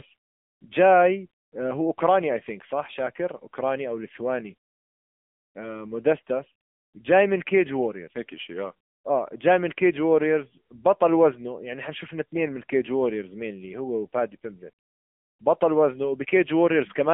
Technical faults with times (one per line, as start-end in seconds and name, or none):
0.00-17.13 AMR narrowband mobile codec